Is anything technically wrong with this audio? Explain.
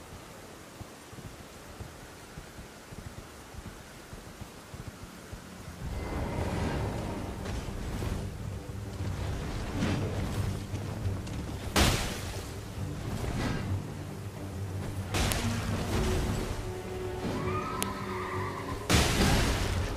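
Yes. There are two sharp, loud clicks, at 15.32 s and 17.83 s. Each is a file header played as audio. The sound appears to be built from separate WAV pieces joined end to end, with their headers left in. Those few dozen bytes of header data get read as sample values. The result is a brief, harsh snap that bears no relation to the surrounding sound. It marks where each new piece begins.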